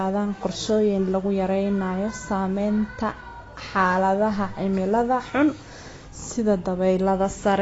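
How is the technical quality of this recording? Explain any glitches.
The recording is clearly compromised by plainly audible lossy coding across the whole speech clip. Throughout, nothing is present above 7.6 kHz, and sibilants and sustained sounds warble and smear, which is likely AAC compression. The encoder quantises coarsely and discards upper bands, consistent with a low bitrate around 24 kbps. Unlike a simple low-pass filter, the damage here also churns within the band that remains.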